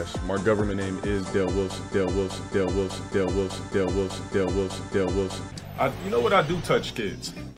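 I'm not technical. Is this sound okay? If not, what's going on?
No. From 2.79 to 4.52 s there is sample clock jitter: an unsteady timing clock, wobbling by roughly a microsecond, takes samples slightly off-time, adding faint hiss on loud, bright moments.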